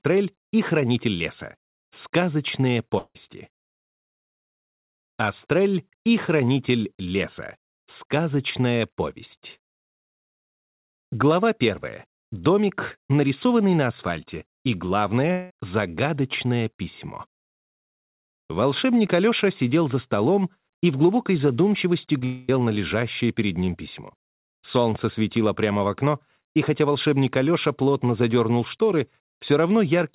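Long network dropouts at 2.98–3.16 s, 15.32–15.51 s and 22.25–22.49 s sound like the last sound stretched into a fading buzz, reaching silence briefly in the first. Each gap of about 0.16 to 0.24 s of audio is likely lost in transit, so playback resumes past it. A short concealed packet loss at 22.19 s just precedes the third gap: roughly 20 ms never arrived, and the receiver covered it by extending the preceding sound, leaving a brief smear before real audio returns. The whole call-grade recording has nothing above 4 kHz, which fits G.711 mu-law at 64 kbps.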